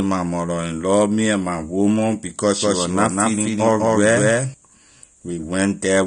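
From the first moment to the end, the speech carries plainly audible AAC compression damage. Nothing sits above about 9.7 kHz, so the sound is dull and smeared. The likely cause is AAC-LC coding at a low bitrate, consistent with roughly 32 kbps, where the encoder cuts the top of the spectrum to save bits. A spectrogram would show a hard ceiling near 9.7 kHz across the whole clip, with patchy, blocky energy beneath it.

From 2.62 s to 4.54 s, just after "and my woman because", a doubled audio track appears. A second full-band copy of the speech runs about a fifth of a second behind and at about the same level, so every syllable is followed by a clean echo with no room tail. It starts and stops abruptly at those times. This is likely a second capture path or an edit that left two out-of-step copies. The waveform would show each burst repeated about 200 ms later, and the spectrogram would show every pattern duplicated and shifted in time.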